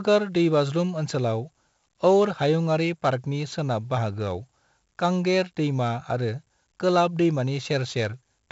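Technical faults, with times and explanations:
Throughout: 4-bit ADPCM compression. A heavy gritty hiss rides on the speech, rising and falling with its loudness, with roughness on sharp onsets, and nothing is present above 7.7 kHz, so the sound is dull. Each sample is coded as a coarse 4-bit step from a predicted value, and the adaptive step size lags sudden changes, leaving level-following noise. The bandwidth fits a 64 kbps stream at a reduced sample rate.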